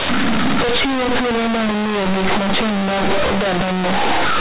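Throughout, the speech is harshly loud and buzzy, with heavy noise filling the pauses: companded audio read as linear, mu-law telephone bytes played as plain 8-bit samples without expansion.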